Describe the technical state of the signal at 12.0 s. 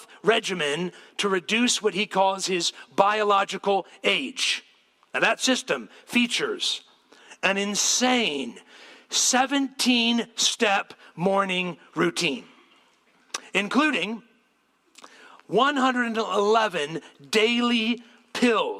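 The signal at 12.0 s is intact, with no fault audible at that point.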